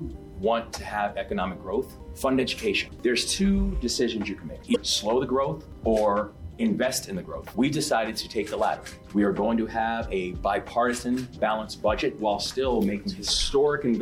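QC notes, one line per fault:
4.72–4.76 s, damaged data in a compressed stream: a brief glitch, heard as a chirp, squawk, click or short hole, lasting about 46 ms. Part of the compressed data at this point is corrupt, so the decoder misreads the affected frames and loses sync. It then hunts for the next valid frame header.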